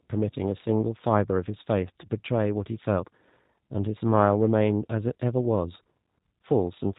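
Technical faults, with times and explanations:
Throughout, G.729 codec: the speech passes through a low-rate vocal-tract-and-pulse coder, consistent with 8 kbit/s, so nothing above 4 kHz survives and the speech sounds plainly rough and synthetic.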